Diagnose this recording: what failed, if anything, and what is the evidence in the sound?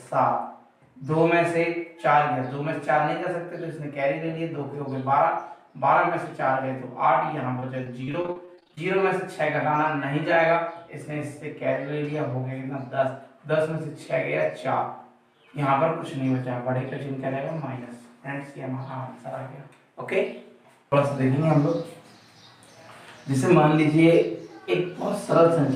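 The failure is at the network stage: repeated packet loss (robotic sound) between 7.59 and 8.79 s. Over that 1.2 s stretch the audio breaks up 13 times, with holes of up to 37 ms each. The receiver patches each one by extending the last received sound, about 0.29 s in total, roughly a quarter of the span. Because these synthetic fills arrive in quick succession, the passage sounds choppy, with pieces missing.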